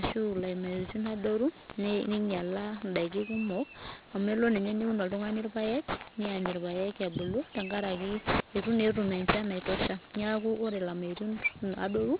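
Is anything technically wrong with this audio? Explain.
Yes. The speech carries aliasing from start to finish. It sounds as if the audio was resampled down without an anti-aliasing filter, which fits a drop from 44.1 kHz to 8 kHz. Everything above the 4 kHz fold point mirrored back into the band as false, unrelated frequencies, only about 10 dB below the speech, so sibilants turn gritty and metallic. On a spectrogram, energy runs hard against the 4 kHz ceiling, with mirrored, inverted traces of the upper harmonics.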